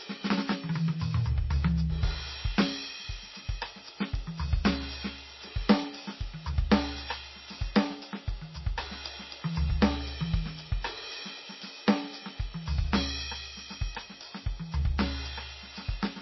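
Throughout the music, the sound swirls audibly. This is likely heavy MP3 compression, fitting a bitrate near 24 kbps.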